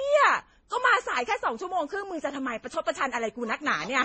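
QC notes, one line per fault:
Throughout: transcoding between lossy codecs. The speech has nothing above 8.4 kHz and carries layered, smeared artefacts from more than one coder. This likely comes from MP3 then Vorbis then MP3 again, at rates that fit about 30 kbit/s each. Every pass adds fresh distortion.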